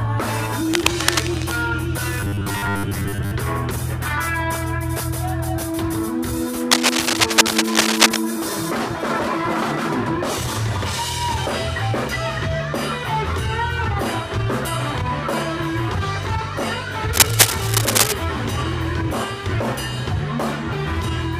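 Scratchy, rustling bursts, which is cable scratch noise, cut in from 0.72 to 1.57 s at about the level of the sound itself, and again from 6.71 to 8.18 s and 17.13 to 18.12 s, about 5 dB above it. That's likely a worn cable or connector being moved. From 2.20 to 3.31 s there's robotic sound from repeated short buffers: a rigid, metallic 100 Hz buzz, likely from the last 10 ms being looped to cover gaps, with most of the audio there repeated rather than new.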